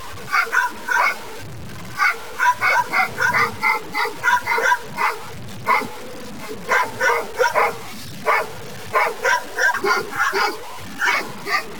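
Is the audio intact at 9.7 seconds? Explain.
No. At 9.73 s the sound jumps ahead with a small blip, a stream segment skipped, likely because one segment failed to load; unlike a dropout, nothing goes silent, and the material simply resumes further on. Throughout, including this moment, there is low bit depth without dither: grainy distortion that follows the sound, with error about 20 dB below the signal, fitting roughly 5-bit truncation. Because the error follows the signal, it changes with the level.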